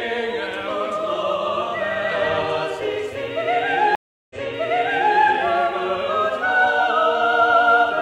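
A stream reconnect occurs from 3.95 to 5.18 s. The connection dropped, the player fell silent for 350 ms, then reconnected and started a fresh decoder partway through the stream. The server resent a burst of buffered audio, so playback resumes about 0.88 s earlier than where it cut off, and the listener hears that stretch of sound again. The restart is not seamless: the first frame comes back fading in.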